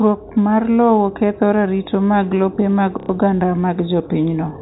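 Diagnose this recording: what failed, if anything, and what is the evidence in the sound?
Network stage: packet loss with the last packet repeated from 3.0 to 3.09 s, right after "ratiro mag lope mag", fitting three repeated 30 ms packets. The spectrogram shows copied blocks, heard as a brief robotic stutter.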